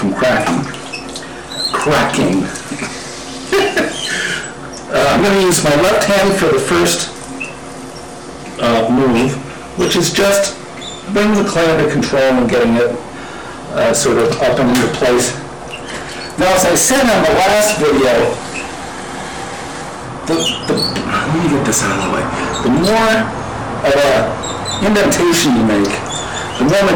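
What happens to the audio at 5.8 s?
Hard clipping is present at 5.8 s and runs through the whole clip. The signal is driven about 25 dB past what a stage could pass, so nearly a third of samples are cut flat. Those flat tops add high harmonics, heard as harsh fuzz on every loud sound.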